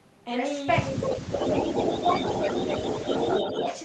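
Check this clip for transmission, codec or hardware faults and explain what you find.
Two faults are audible: speech suppressed in double talk, and echo leak. Both point to a loudspeaker-side echo canceller. The audio also passes through an Opus call path, and its coding noise and 12 kHz upper limit are audible.

Speech suppressed in double talk occurs from 0.91 to 2.11 s, dipping by up to about 10 dB over roughly a second. Shorter dips of about 5 dB occur at 2.65 to 2.71 s and 3.18 to 3.33 s. The likely cause is the canceller mistaking overlapping talk for echo and attenuating everything. The waveform shows sagging envelopes in those spans.

Echo leak appears as a copy of the sound delayed by 247 ms. It is first heard at 0.97 to 1.15 s, about 10 dB below the speech, then from 1.34 to 3.78 s at about 5 dB below. The likely cause is residual loudspeaker pickup slipping past the canceller. 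A spectrogram shows fainter duplicate harmonic patterns offset a quarter-second later.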